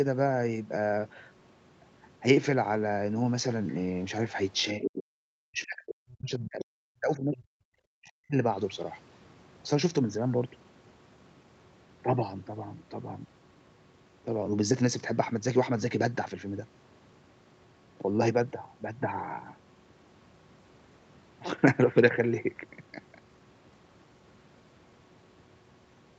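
It's a speech recording that came through a call, and the trouble sits in its first few seconds. From 3.67 to 3.75 s there's a brief scrap of the other side's voice leaking through, very faint, somewhere around 30 dB under the talker, likely because the echo canceller didn't fully scrub the loudspeaker sound out of the mic. Then speech is suppressed in double talk from 4.73 to 7.76 s and again from 7.92 to 8.38 s: the talker's voice sinks by as much as 40 dB or so, the canceller apparently unable to tell the talker from the echo while both sides were talking and turning everything down. The top end stops around 8 kHz, which is just the call's bandwidth.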